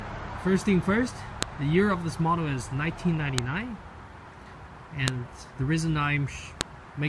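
Separate WAV pieces were joined without their headers being stripped, so a few dozen header bytes at each join are read as sample values: a file header played as audio. The result is a sharp, loud click or snap, independent of whatever the sound is doing at that moment, at 1.43, 3.38, 5.08 and 6.61 seconds, each marking the start of a new piece and lasting only a millisecond or so.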